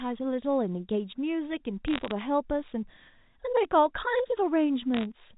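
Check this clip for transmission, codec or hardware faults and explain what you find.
There are two short bursts of bit errors on a digital phone line, from 1.88 to 2.11 s and from 4.94 to 5.05 s. The speech is carried as G.711 telephone audio, so everything above 4 kHz is gone. In the two bursts, roughly 0.4 and 0.5 percent of the bits get flipped. Every flip corrupts a single sample, and a flip on the sign of a loud sample or on a high-order bit throws that sample far off, so you hear sharp ticks clustering into crackle over speech that's otherwise unchanged.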